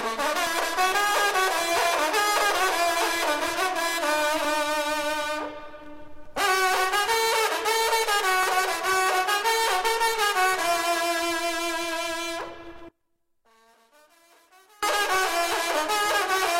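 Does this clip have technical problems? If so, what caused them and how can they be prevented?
Yes. There is an overlap between stream segments at 0.47–0.50, 4.45–4.48, 8.43–8.46 and 12.41–12.44 s. Every 4 s, about 30–38 ms is cut, causing a skip. Align segment timestamps so boundaries don't overlap.

From 12.89 to 14.83 s, the sound drops by about 32 dB, leaving a faint residue. One channel inverted is the likely cause, cancelling in mono. Check channel polarity before summing.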